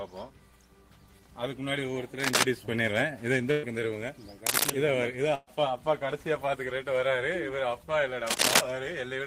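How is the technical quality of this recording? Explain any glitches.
The recording has two kinds of fault, a scratchy connection and dropped audio.

Cable scratch noise appears at 2.19 to 2.43 s, 4.46 to 4.70 s and 8.27 to 8.62 s. A worn cable or connector is likely shifting, so its contact resistance jumps about. That lays dense, ragged scratching over the sound, somewhat louder than the sound itself.

A burst of packet loss occurs at 3.51 to 3.66 s and 5.35 to 5.50 s. About 120 ms of audio never arrived in time, and the receiver bridged each gap by stretching the last sound and fading it. This gives a brief held, dimming sound before the audio jumps ahead.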